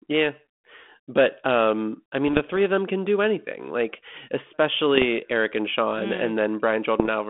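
From 2.28 to 2.57 s the speech breaks into pops and gritty bursts with brief jumps in level. These are bit errors on an ADPCM link. Flipped bits corrupt the adaptive step size and predictor, so each error keeps ringing for a few milliseconds instead of clicking once. The narrow band underneath, roughly 200 Hz to 3.4 kHz, fits 32 kbit/s G.726 as used on DECT cordless phones. On a waveform the errors appear as sharp spikes followed by short stretches of misshapen, swollen signal. A spectrogram shows thin vertical smears across the whole telephone band.

At 4.82 s a low, steady buzz starts and lasts to the end: video or display buzz. A screen or video cable is coupling into the audio. The fundamental sits at the 59.94 Hz field rate, with hash above it and a whistle near 15.7 kHz at the line rate. It stays about 45 dB below the speech. A spectrogram shows a stack of evenly spaced horizontal lines at the bottom, a fine haze above them, and a lone thin line at 15.7 kHz, well above the telephone band.

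More ADPCM bit errors, at a higher rate than before, hit from 4.95 to 5.05 s and again from 7.00 to 7.09 s. They are shorter but denser clusters of pops and rough bursts over the buzz, showing the same spike-then-distortion shape on the waveform.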